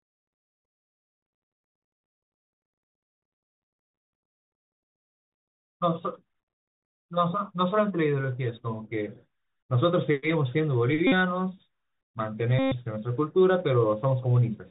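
Speech, heard through a Bluetooth CVSD headset codec throughout. Nothing above 4 kHz comes through. The codec sends one up-or-down bit per sample, which fits a 64 kbit/s link. Its step size cannot keep pace with loud, bright sounds, so those distort, s sounds turn scratchy, and a grainy hiss sits underneath. Two Bluetooth headset packet repeat runs follow. From 11.07 to 11.12 s, about 49 ms of packets went missing. From 12.59 to 12.74 s, about 128 ms went missing. Each time, the last packet was decoded again. That repetition every 3.75 ms makes a steady buzz near 267 Hz. The second, longer run points to 34 lost packets.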